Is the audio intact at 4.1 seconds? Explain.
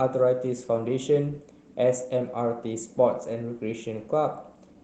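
Yes, the speech at 4.1 seconds is intact, with no dropout, glitch or other fault at that moment.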